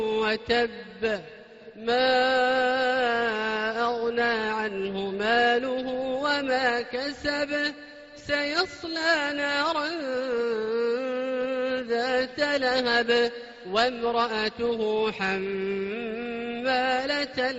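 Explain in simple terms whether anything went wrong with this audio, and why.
Nothing went wrong with this audio.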